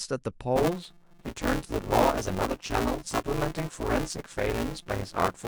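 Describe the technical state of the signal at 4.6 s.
At 4.6 s the playback path is in buffer tearing, which runs from 0.56 s to the end of the clip. The writer and the hardware reader of the ring buffer have drifted so they cross mid-period, leaving roughly half of each buffer filled with audio about 10 ms stale, spliced in with hard edges. The speech carries a steady robotic buzz at 172 Hz, which fits a 256-sample buffer, present wherever there is signal.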